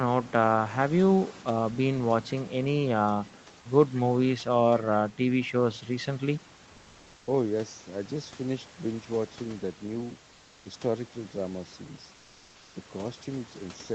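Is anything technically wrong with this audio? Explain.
Yes, there's one issue. From 10.33 to 10.65 s, and again from 12.15 to 12.75 s, comfort noise takes the place of the background. The room hiss turns flat and featureless and drops by about 1 dB. That's likely Opus DTX halting transmission during the gaps while the receiver fills them with synthetic noise.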